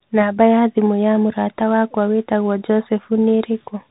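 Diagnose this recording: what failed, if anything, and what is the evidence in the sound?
Codec stage: a Bluetooth CVSD headset codec runs throughout. Nothing passes above 4 kHz, s sounds turn scratchy and granular hiss sits under the speech. Its one-bit up/down coding, which fits a 64 kbps link, can't track loud high sounds, so they distort.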